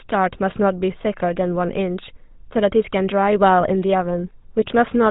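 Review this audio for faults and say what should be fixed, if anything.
GSM full-rate codec damage runs through the whole speech clip: nothing above 4 kHz survives, and the voice carries a buzzy, gravelly roughness from the regular-pulse excitation that keeps only every third sample, which fits a 13 kbps GSM full-rate stream. Record or route the call over a wideband path instead of a legacy GSM full-rate link.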